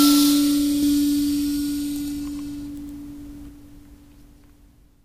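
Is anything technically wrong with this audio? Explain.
Yes. A doubled audio track runs from 0.83 s to 3.49 s of this music: a second, full-band copy of the same material sits roughly a tenth of a second behind the original at about equal loudness. The likely cause is the signal being picked up again through a slower path, or two copies left out of alignment in an edit. It sounds like a dry, flamming slapback with no room tail, switching in and out abruptly.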